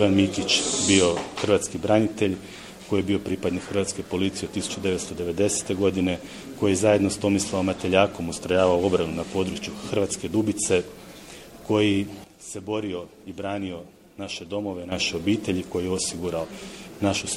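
At 12.24 s there's a sudden gain jump: sound and background noise drop together by about 9 dB until 14.92 s, likely a gain change applied without any ramp.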